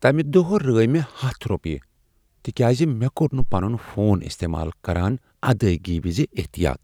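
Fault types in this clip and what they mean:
Phantom power thump: a supply switched on or off on a live input sends a voltage step through the coupling capacitors, heard here at 3.40 s, just after "تکیاز مےٚ کوٚر", as a deep thump peaking at about -10 dBFS that dies away within roughly 53 ms.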